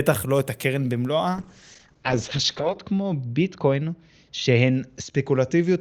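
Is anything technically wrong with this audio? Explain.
Yes. From 1.34 s to the end there is a call bitrate drop: the audio turns rough and watery as the codec starves for bits. The top end falls from 20 kHz to 8 kHz, which points to a fall from roughly 48 kbps to roughly 10 kbps. Unlike a plain low-pass filter, it also smears detail, and unlike packet loss, there are no gaps.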